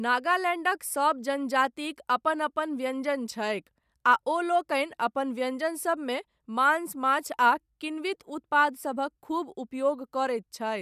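No technical faults are audible.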